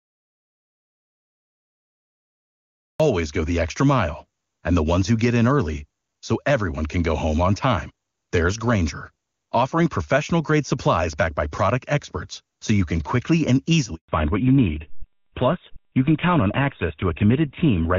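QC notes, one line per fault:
0.00–3.00 s, audio dropout to silence: the clip opens in silence, with no room tone or hiss, and the speech arrives abruptly on "go the extra mile" as though already mid-flow. That flat, empty stretch means the input was absent and silence was written in its place, most likely because a device or link had not yet connected or a mute was still engaged. Whatever came before that point cannot be recovered.
13.95–14.09 s, handover gap: right after "you can quickly and" the voice collapses within a few tens of milliseconds into a hole of about 140 ms, then resumes on a different-sounding channel. The fast fade and short clean gap are typical of a call being handed from one network to another. No speech frames reached the receiver during the switch, so the syllables spoken then are lost.
14.09 s to end, fallback to narrowband: from the handover onward the voice turns duller, boxier and rougher, with nothing left above 4 kHz, where the earlier stretch carried clear HD Voice detail. 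The bandwidth cut and coarser texture point to the call dropping from high-rate AMR wideband, around 23.85 kbit/s, to an older narrowband codec, which fits GSM full rate at 13 kbit/s. The loss of sibilance and air continues to the end of the clip.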